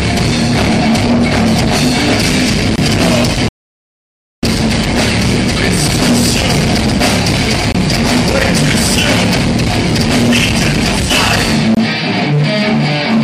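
At 2.76 to 2.78 s the first gap between chunks appears: a 23 ms hole of silence with hard edges, where the audio was delivered in 4-second chunks and nothing filled the join. The hole fits a frame of codec padding or a late chunk start. No sound is lost, but the flow breaks with a tiny dropout. On a waveform it is a flat line with abrupt edges, and on a spectrogram a thin, clean vertical blank across all frequencies.

From 3.49 to 4.43 s a rebuffering stall stops the sound dead for about 0.94 s. The player ran dry of downloaded audio and waited for more, then resumed exactly where it had stopped. Nothing is skipped, but nearly a second of dead air is inserted mid-sound. The waveform shows a long flat stretch between two clean cuts, and the spectrogram a wide, empty vertical band with no smearing at either edge.

The gap between chunks recurs at 7.72 to 7.75 s and again at 11.75 to 11.77 s, each the same 23 ms hard-edged hole at the next 4-second chunk boundary. 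This is likely the same padding or late start at every join. Each is heard as a brief interruption. On the spectrogram these show as matching narrow blank slits, evenly sized, repeating at the chunk joins.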